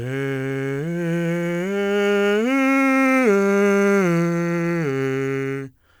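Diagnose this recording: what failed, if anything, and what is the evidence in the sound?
Crude rate conversion at the sample-format conversion stage runs through the whole piece of music. A gritty, inharmonic fizz rides on the louder and brighter passages and tracks them. The grit points to a nearest-sample conversion, with samples repeated on a fixed cycle. That cycle fits a 44.1 kHz to 48 kHz change. On a spectrogram, faint spurious lines and a grassy floor sit around 30 dB below the music, unrelated to its harmonics. The waveform shows occasional stair-step duplicated samples.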